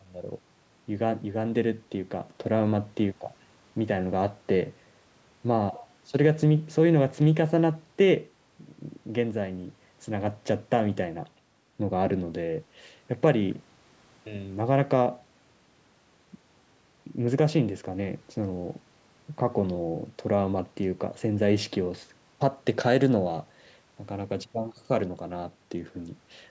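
No technical faults can be heard anywhere in this recording.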